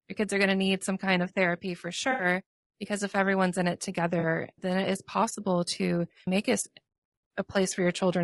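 Across the whole speech clip the voice is rough and grainy, with noise filling the gaps between harmonics and a thin, synthetic-sounding top band. This is most likely low-delay AAC compression, AAC-ELD at 32 kbps, whose short frames resolve pitch poorly. Unlike packet loss, the damage is constant rather than patchy.

At 2.11 to 2.25 s, AAC frame loss with concealment produces a smeared, noisy patch of about 80 ms, which fits roughly four lost frames. At 4.19 to 4.25 s a shorter, 40 ms patch points to about two frames. The decoder rebuilt each gap from the last good spectrum, so the sound smears instead of dropping to silence or clicking as a plain dropout would.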